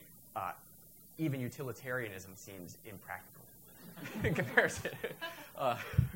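Low bit depth with noise shaping runs throughout. Coarse rounding, consistent with about 9 bits, leaves a thin hiss pushed toward the highs, roughly 20 dB below the signal.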